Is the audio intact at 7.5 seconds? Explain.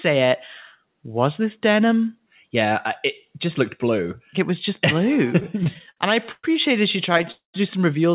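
No. From 7.32 to 7.56 s a call audio freeze occurs, likely because packets stalled and the jitter buffer ran dry. The receiver stretches the last sound into a fading buzz, then about 140 ms of silence, before the sound resumes roughly 220 ms late with nothing lost.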